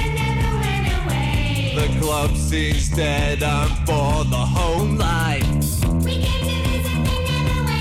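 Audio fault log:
4.79 s to end: section at the wrong speed. From 4.79 s the music runs 1.12 times faster and sits about two semitones higher, with tempo and pitch jumping together at once. The likely cause is this segment being played against the wrong sample clock.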